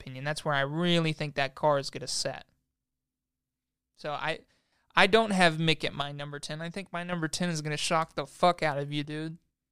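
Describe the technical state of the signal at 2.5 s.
At 2.5 s the speech sits inside a sudden level drop of about 6 dB, running from 2.32 to 4.72 s, between "that car is gonna" and "I don't have". The likely cause is one channel dropping out before the mono sum. Unlike a gain dip or fade, the drop and recovery are instant steps, not ramps.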